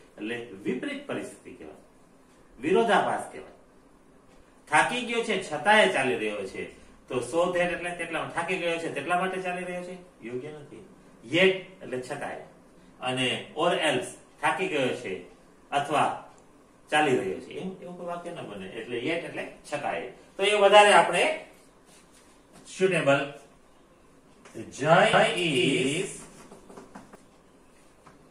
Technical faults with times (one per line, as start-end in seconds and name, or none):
25.13-27.15 doubled audio track